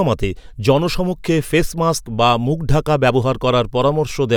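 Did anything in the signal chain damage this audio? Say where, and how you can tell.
No, no damage heard anywhere.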